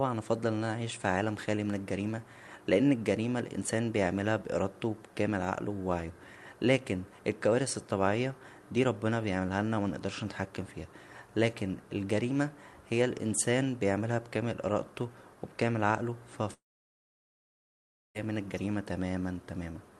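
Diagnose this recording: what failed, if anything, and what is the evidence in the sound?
Long network dropout, 16.53 to 18.17 s, at the network stage. Right after "و بكامل عقله فا" the speech turns into a brief buzzy continuation of the last sound that fades, leaving about 1.5 s of silence before the speech resumes at "من الجريمه". Roughly 1.6 s of speech is simply gone. The likely cause is a run of lost packets: the receiver's concealment stretched the final sound, gave up, and muted until packets arrived again. The Opus call path, whose top end stops near 12 kHz, carries through on both sides.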